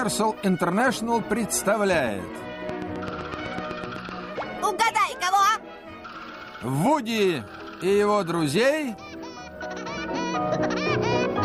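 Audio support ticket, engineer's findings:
Train of clicks, 2.69 to 4.10 s. About ten near-identical clicks, regular spacing, roughly 7.9 per second, peaking around 10 dB above the programme sound. Likely electrical interference from nearby equipment or a faulty connection or power supply injecting periodic pulses into the signal path.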